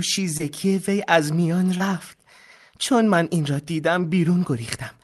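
At 0.37 to 0.41 s and again at 1.77 to 1.82 s, there is short concealed packet loss. About 20 ms of the speech did not reach the decoder in time at each point. The receiver covered each gap by extending the preceding sound for roughly 21 to 22 ms, then blended back into the real signal. Each event is heard as a brief smear or wobble, against the band-limited sound of the call codec.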